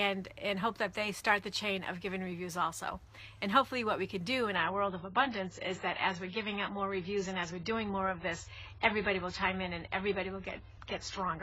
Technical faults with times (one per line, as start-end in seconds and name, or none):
4.56-11.43 adaptive stream at a lower bitrate